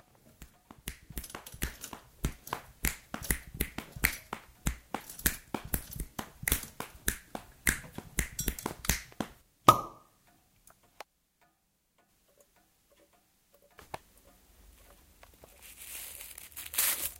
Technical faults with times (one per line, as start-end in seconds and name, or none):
none